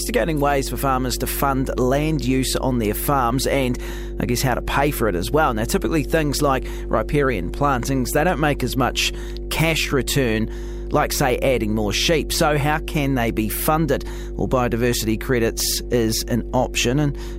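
From start to finish, mains hum sits under the speech. It is a steady low tone at 50 Hz, loud, roughly 10 dB below the speech. A ground loop or nearby transformer has let the power line leak into the signal path.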